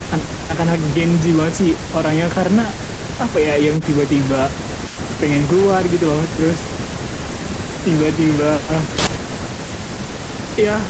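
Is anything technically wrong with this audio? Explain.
No, nothing technically wrong can be heard here.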